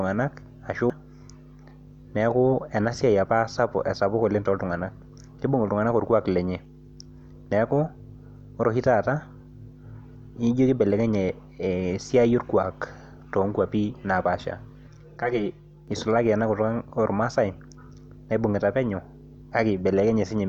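Hollow, phasey coloration takes over this speech clip from 14.88 to 15.88 s. This is channel delay (comb filtering): one channel arrives around 5 ms behind the other, and when the two are summed to mono, the shared content cancels at evenly spaced frequencies. The first notch sits near 100 Hz, with further notches repeating at regular intervals above it.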